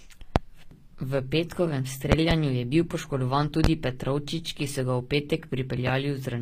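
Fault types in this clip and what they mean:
HE-AAC compression: likely cause of the plainly audible treble damage throughout; sound above the crossover is rebuilt rather than original, stops near 15.5 kHz, and suggests a low bitrate.
Loud pop: sharp pulses laid over continuing speech, at 0.36, 2.1 to 2.35 (a double, before "je bil poškodovan"), 3.64 and 5.87 s; likely electrical, roughly 25 dB above the signal, the last about 15 dB.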